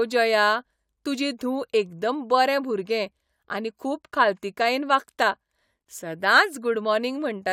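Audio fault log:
Nothing to log here, since the speech comes through without a single technical problem worth flagging.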